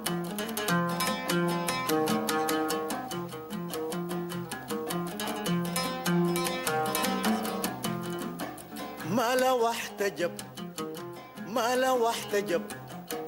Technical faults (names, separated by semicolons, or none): gain pumping